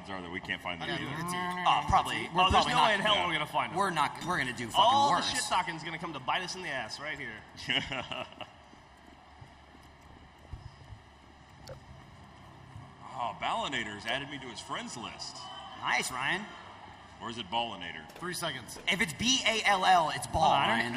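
Nothing goes wrong anywhere in the audio, so there's no technical fault to point to at any moment.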